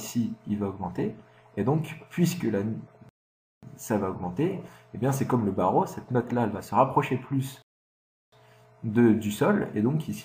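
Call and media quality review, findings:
Rebuffering stall at 3.09–3.63 s and 7.62–8.32 s. Player buffer ran dry. Silence, then resumes where it stopped. Adds 0.54 s and 0.70 s. Nothing lost.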